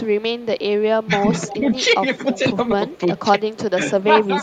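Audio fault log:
0.03–0.07, 0.39–0.62, 1.36–2.38, 2.89–3.22 and 3.53–3.58 s, echo leak: a delayed copy of the speech trails the original by 322 ms. It is quietest near the start and end (about -30 to -35 dB) and strongest from 1.36 to 2.38 s (about -15 dB). This is likely a loudspeaker-side echo canceller letting residual pickup through. On a spectrogram, the harmonic patterns repeat as dimmer, smeared ghosts shifted 322 ms later. The waveform shows low-level bumps filling gaps after syllables.
1.05–1.11 and 3.72–4.31 s, speech suppressed in double talk: the talker's level dips briefly, by about 10 dB in the first short span and by about 15 dB in the later one, where roughly 150 ms in pieces is pulled down. This is likely the echo canceller mistaking the talker for echo while both sides spoke and attenuating everything. A spectrogram shows energy fading in vertical bands. The waveform envelope shows sudden notches.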